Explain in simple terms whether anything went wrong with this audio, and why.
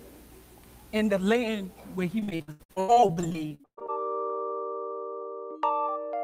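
Repeated packet loss (robotic sound) runs from 2.19 to 3.90 s. Pieces of the sound kept going missing, and each hole, up to about 0.12 s long, was patched by stretching the last sound. Nearly half that stretch is patched, so it sounds choppy and robotic.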